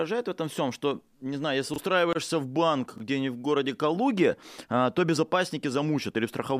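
At 1.74 s and again at 2.96 s, the speech briefly jumbles. These are chunks out of order. A 20 ms chunk arrives one chunk late and plays after its neighbour. Nothing is lost, but the swap creates three hard joins.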